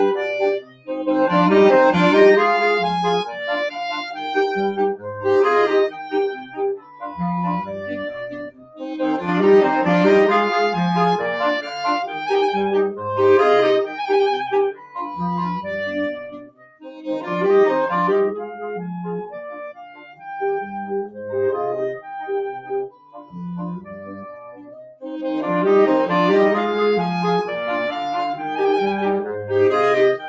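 Right through the clip there's a noise suppressor applied to music or sounds, tuned for speech, treating held tones and tails as noise. Its gain swings by about 10 dB, so the audio pumps and thins. With nothing above 8 kHz, it's clearly a call path.

The sound cut by the noise suppressor hits at 0.59 to 0.9 s (about 18 dB down), 5.9 to 7.17 s (about 15 dB) and 8.29 to 8.82 s (about 19 dB). Sustained parts sink or their decays get chopped.

From 9.16 to 9.28 s everything, background included, drops about 4 dB at once. That's likely a sudden gain jump, a digital level change applied without a ramp.

More suppressor cuts follow at 14.73 to 14.96 s (about 12 dB), 16.29 to 17.08 s (about 21 dB, the deepest), 19.52 to 20.25 s (about 15 dB), 22.61 to 23.35 s (about 11 dB) and 24.52 to 25.04 s (about 15 dB).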